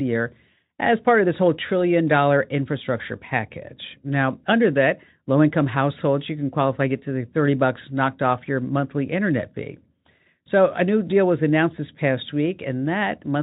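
No technical faults are audible.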